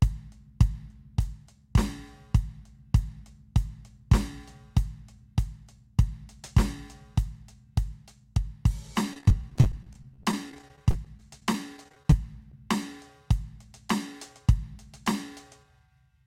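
Between 9.13 and 12.13 s the stream suffered repeated packet loss, with data going missing or arriving late dozens of times in quick succession, each gap no longer than 24 ms. The receiver bridged every hole by extending the music it had just played, so about 17 percent of that three-second stretch, roughly half a second in all, is filled-in sound. The music turns choppy as real fragments alternate with synthetic continuation.

Shortly after, at 12.52 s, one more brief piece went missing, about 10 ms of audio, and was covered by short concealed packet loss. The decoder carried the preceding sound forward for roughly 8 ms and then crossfaded back into the real signal. Because the patch is so short, it registers as a momentary smear or wobble in the music rather than an audible gap.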